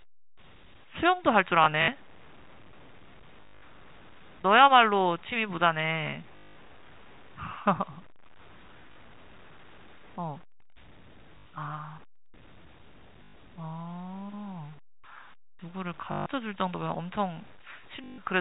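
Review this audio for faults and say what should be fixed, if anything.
A grainy, gritty distortion runs through the whole recording, sitting only around 30 dB below the speech and following its level. The likely cause is low bit depth without dither: the signal appears to have been cut to about 8 bits by truncation rather than rounded with dither, so the error tracks the waveform and turns quiet passages rough instead of leaving a steady hiss. Keep at least 16 bits through processing and apply dither whenever the word length is reduced.

Packet loss with last packet repeated occurs eight times: 1.64–1.88 s, 3.42–3.62 s, 6.36–6.56 s, 8.92–8.96 s, 11.38–11.46 s, 13.24–13.34 s, 16.12–16.26 s and 18.04–18.18 s. Missing audio was replaced by replaying the last received chunk, and the repeats don't line up with the pitch. Longer runs give a robotic stutter with a buzz near 50 Hz, which fits 20 ms packets. 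The first two stretches are broken up, losing 100 ms over 240 ms and 160 ms over 200 ms. The 6.36 s stretch loses a full 200 ms. The 4 kHz telephone bandwidth of the G.711 coding can be heard under these. Use a jitter buffer with proper packet loss concealment, or forward error correction, instead of plain repetition.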